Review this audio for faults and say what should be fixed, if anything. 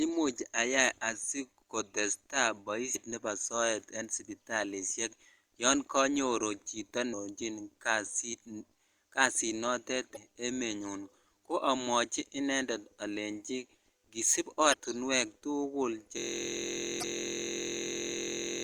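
Short glitches at 2.92–2.96 s (after "ayai asikotesta"), 10.13–10.17 s, 14.70–14.74 s and 17.00–17.04 s are damaged data in a compressed stream: corrupted frames make the decoder lose sync and skip ahead.

From 16.18 s to the end, a steady buzz at about 43 Hz is a system hang loop, where the driver froze and the sound hardware replays one 23.22 ms buffer, which fits 1024 samples.

Check stream integrity with checksums or retransmission, and keep the audio driver from stalling so the ring buffer is never replayed.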